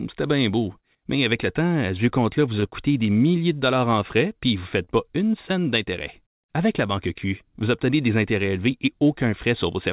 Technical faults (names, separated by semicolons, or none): short stall from a late packet; short concealed packet loss